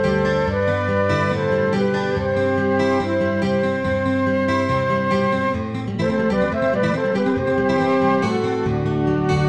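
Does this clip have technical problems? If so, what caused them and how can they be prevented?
Yes. A time-stretched section runs from 5.78 to 7.78 s, where the audio suddenly plays at about twice its normal pace, 1.99 times as fast, while its pitch stays unchanged. The likely cause is software squeezing this stretch to fit a shorter length, keeping the pitch steady by discarding short slices of the waveform and joining the rest. The dropped pieces make this two-second passage sound rushed. To prevent it, fit the material by editing or trimming rather than stretching, or limit any tempo change to a small amount applied evenly.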